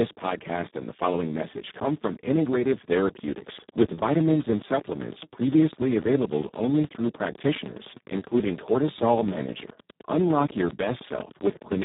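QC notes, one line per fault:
Throughout: Speex codec, heavily damaged speech with a hoarse, noisy texture and nothing above 3.8 kHz. This fits a rate near 4 kbps, where the CELP coder has too few bits to model the excitation and falls back toward vocoder-like output.
2.98 to 11.83 s: train of clicks, a steady run of about 100 near-identical pops at roughly 9.9 per second, evenly spaced and about 10 dB above the speech, audible through pauses as well. Likely cause is interference from nearby equipment or a faulty connection.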